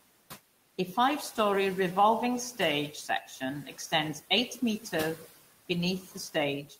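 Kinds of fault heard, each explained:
Noise suppressor artifacts, throughout the clip: the suppressor tracks the steady room noise and pulls those bands down by about 18 dB, frame by frame, so the noise sinks between phrases and rises again under the speech.
Speech cut by the noise suppressor, at 2.92–3.42, 3.65–3.92, 5.16–5.26, 6.02–6.16 and 6.66–6.76 s: quiet parts of the speech are mistaken for background and turned down with it, by about 9 to 12 dB, so brief pieces sound swallowed and faint.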